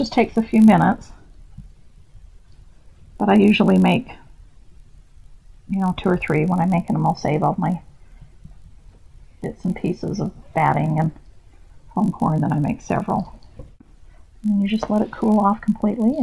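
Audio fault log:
Throughout, resampler restarted on every block: the conversion, which fits a 48 kHz to 24 kHz change, processed each 20 ms block in isolation. Each edge lacked its true neighbouring samples, leaving a small error that repeats as a 50 Hz buzz riding on the signal.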